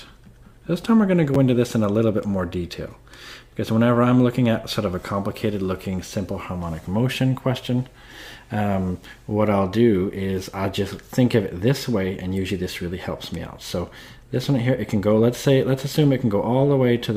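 At 1.34 s the audio has a repeated buffer. New audio failed to reach the device in time, so it played its last block once more. That block lasts about 10.7 ms, which fits a 512-sample buffer. The repeat is so short that it comes across as a single click or a tiny buzz rather than an obvious stutter. Hard joins at both ends of the repeat cause the click. Roughly 10 ms of audio is lost at that point.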